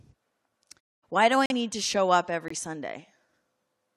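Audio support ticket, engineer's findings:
Corrupt frame muted, 1.46–1.52 s and 2.48–2.52 s: abrupt silent gaps, sized like three frames then one, where the decoder rejected damaged packets and silence was inserted, timing preserved, unlike the smooth muted pauses.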